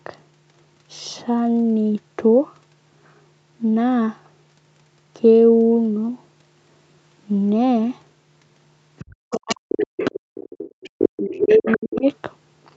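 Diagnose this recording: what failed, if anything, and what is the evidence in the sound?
The echo canceller in the call processing likely failed to subtract the loudspeaker signal, so the other side's voice leaks through at 8.98–9.15 s (about 25 dB below the talker), 9.31–10.9 s and 11.38–11.77 s (about 10 dB below), and 11.96–12.01 s (about 30 dB below).

When both sides talk at once, speech is suppressed in double talk. The talker dips by up to about 40 dB between 9.24 and 9.66 s, roughly 300 ms in total, and again between 10.95 and 12.06 s, about a second in total. The canceller likely cannot separate the near voice from the echo, so it attenuates both together.

The background is gated by the echo canceller at 10.2–10.35 s. The canceller clamps the microphone path while the loudspeaker plays, so the room sound falls by about 40 dB for roughly 150 ms. It returns once the suppression releases.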